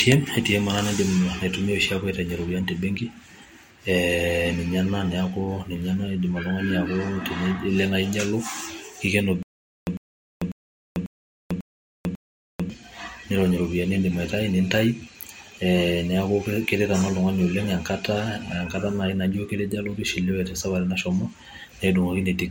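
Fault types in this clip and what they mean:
stutter with silent gaps: playback likely stalled, replaying its last fragment at each retry before running empty. From 9.43 to 12.70 s a 101 ms burst repeats six times, each followed by 444 ms of digital silence, and the speech meant for that span is lost.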